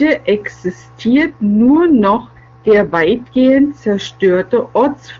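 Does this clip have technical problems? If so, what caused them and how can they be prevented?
Yes. From 1.10 to 3.60 s there's an AMR rate drop: the speech turns rougher and more synthetic, then cleans up again. The bandwidth holds and there's no gap. This is the network dropping the AMR-WB codec to a lower mode on a weak radio link, spending bits on error protection instead of speech detail. It fits a step from the top 23.85 kbit/s mode to around 8.85 kbit/s. Outside that stretch the HD Voice coding sounds clean. To prevent it, keep the handset where the radio signal is strong.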